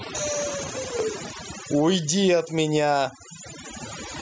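From the first moment to the end, the speech carries overdone noise removal. The noise reducer was set far too hard, so any frequency band sitting close to its noise estimate is pulled down or shut off entirely, and the quieter parts of the voice are caught along with the hiss. The gaps fall to near silence dotted with twinkling specks, and the voice's top end stops at 8 kHz as expected from the call's microphone path.

Also present throughout is gain pumping. The gain swings up and down in the region of 15 dB. Loud and soft passages sit unnaturally close in level, giving a squashed, breathing quality. The likely cause is input gain set far too high for the microphone, with a fast limiter or compressor clamping down on every loud sound.

From 0.63 to 1.30 s there is processor overload crackle. Over this stretch the processor fails to finish its audio buffers on time, missing a dozen or more deadlines again and again. 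Each miss drops its slice of audio outright rather than repeating anything, leaving a tiny hard-edged gap. The gaps fit buffers of around 5 ms. Strung together, these gaps produce a gritty tearing crackle over the voice that stops once the load eases.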